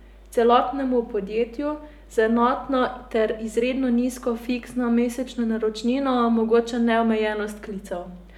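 A mains hum runs under the speech from start to finish. It is a steady low tone at 50 Hz, with some low harmonics stacked above it. The cause is power-line energy leaking into the signal path. A ground loop or a nearby transformer would do this. The hum sits well below the speech, roughly 25 dB down. It is a constant drone beneath the voice.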